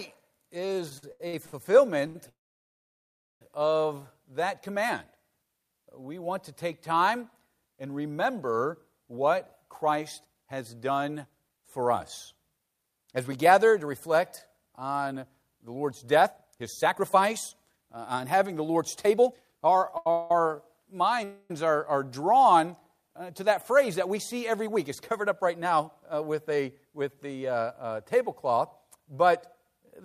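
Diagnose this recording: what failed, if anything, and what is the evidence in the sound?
Repeated stalls (stutter), 0.89 to 2.16 s, a network and jitter buffer fault. Six brief gaps, the longest 81 ms, are filled with continued sound, about 27% of that span. Packets arrived late or too slowly, so the buffer kept draining. Nothing is lost, but the audio drags.

Call audio freeze at 2.29 to 3.42 s, 20.12 to 20.31 s and 21.24 to 21.51 s. The sound is held and then stops, and the first freeze runs 1.12 s, mostly silent. It then resumes where it stopped. The likely cause is packets held up in transit, emptying the jitter buffer.

Jitter buffer speed-up, 9.09 to 19.76 s at 113% speed and 23.30 to 27.25 s at 106%. The pitch stays the same but the pace is hurried. To shed built-up delay, the receiver cut short pitch-period slices, roughly 1.5 s in the first stretch and a fifth of a second in the second.

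Short stall from a late packet at 19.98 to 20.07 s. One sound is held for 81 ms. A packet missed its playout time, so the receiver stretched the last sound and continued from the same point once the packet arrived.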